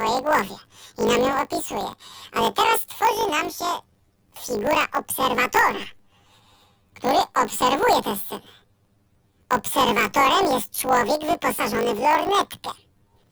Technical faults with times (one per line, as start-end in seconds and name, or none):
0.00-13.32 planar audio read as interleaved